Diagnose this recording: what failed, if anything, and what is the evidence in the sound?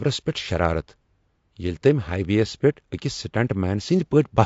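The codec stage failed: low-delay AAC compression, likely AAC-ELD, is plainly audible across the whole speech clip. The voice sounds rough and grainy, with noise filling the gaps between pitch harmonics and a thin, synthetic-sounding top band. The very short frames resolve harmonics poorly and demand more bits, and the damage fits a rate around 32 kbps. Unlike packet loss, nothing drops out or repeats. The degradation is continuous rather than arriving in bursts.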